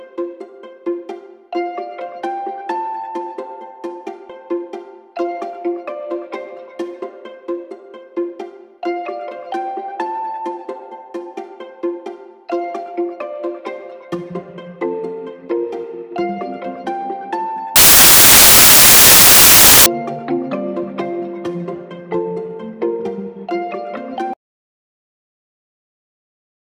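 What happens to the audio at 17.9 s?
At 17.9 s the sound falls inside a stretch of samples built from the wrong bytes, running from 17.76 to 19.86 s. The reader misassembles each sample's bytes, so the rapidly varying low-order bits dominate, producing loud, harsh broadband noise.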